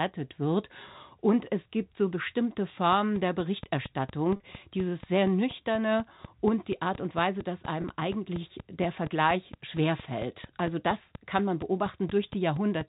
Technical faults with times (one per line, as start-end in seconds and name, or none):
2.92-12.82 train of clicks
4.36-4.40 packet loss with pitch repetition
7.82-7.84 packet loss with pitch repetition